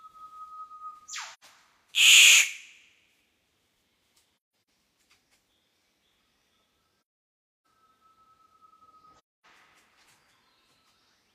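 At 1.33 s the audio drops into a short, soft-edged gap lasting until 1.44 s, the classic sign of AAC frame loss with muting: the decoder zeroes the missing frames, and the overlapping windows fade sound out and back in. From 4.33 to 4.67 s the holes are scattered, the longest around 150 ms. Similar quiet dropouts follow at 7.40 to 7.65 s and 9.18 to 9.46 s.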